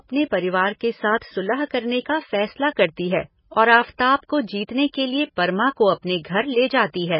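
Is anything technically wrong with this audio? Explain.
Yes. Throughout the speech, the likely cause is MP3 compression at a bitrate low enough to suggest about 16 kbps. Short of bits, the encoder discards everything above 5.5 kHz and switches weak frequency lines on and off between frames, so the speech sounds dull, heavily watery and swirly.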